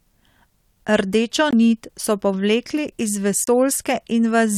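At 1.51 s the speech drops to silence for about 21 ms, and at 3.44 s for about 31 ms, each resuming cleanly: a likely Bluetooth stall, the earpiece buffer emptying while delayed packets were resent. Waveform and spectrogram show sharp-edged blank gaps across all frequencies.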